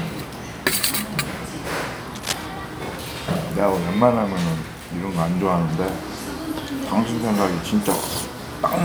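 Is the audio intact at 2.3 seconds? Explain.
No. From 2.16 to 2.47 s a burst of cable scratch noise, uneven rustling only slightly below the sound, sits on top, likely from a worn contact being moved.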